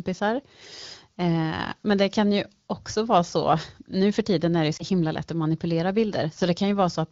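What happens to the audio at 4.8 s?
A lost AMR speech frame at 4.77 to 4.84 s: the decoder repeats the last pitch and vocal tract settings at reduced gain, causing a brief warbling dip. The waveform shows a short drop in level, and the spectrogram shows briefly smeared harmonics over about 20 ms, which fits a single lost frame.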